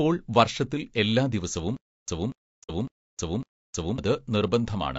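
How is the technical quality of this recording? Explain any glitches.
The recording has three faults: steady codec damage plus a stalled, stuttering stretch with a short muted hole inside it.

Low-delay AAC compression is audible throughout. The speech was likely squeezed through a low-delay AAC encoder of the AAC-ELD kind, at a bitrate that sounds like about 32 kbps. Its short frames capture pitch harmonics poorly, so the voice comes out rough and grainy, with noise between the harmonics and a thin, synthetic top end.

Stutter with silent gaps runs from 1.77 to 3.98 s. The stream likely stalled and, at each retry, replayed its last fragment before running dry. A 240 ms burst returns four times, each followed by about 314 ms of digital silence, a cycle of 554 ms. The speech meant for that span is lost.

AAC frame loss with muting happens from 2.63 to 2.71 s, right after "വർഷത്തിൽ എല്ലാ". 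The decoder zeroed the spectrum of the missing data, and the overlapping windows fade the sound out and back in. The result is a soft-edged hole of about 60 ms, which fits two lost frames.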